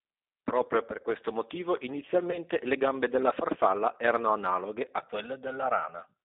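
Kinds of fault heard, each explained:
G.729 codec: 8 kbit/s speech coding confines the speech to about 250 Hz–3.7 kHz and leaves a plainly rough, synthetic texture throughout.
VoIP packet loss concealed by the speech codec: About 20 ms goes missing after "per questo motivo" (2.31–2.39 s), patched with a fading extrapolation before "le gambe della farfalla".
Channel delay (comb filtering): From 4.99 s, after "della farfalla erano analoghe", a roughly 1.5 ms delay summed to mono cuts notches near 300 Hz, sounding hollow.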